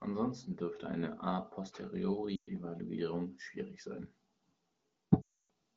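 At 2.35 to 2.48 s the speech smears and fades briefly, and at 5.22 to 5.28 s it draws out and drops toward silence. These are lost AMR speech frames: the wideband decoder concealed corrupted frames by repeating the last good parameters with falling gain.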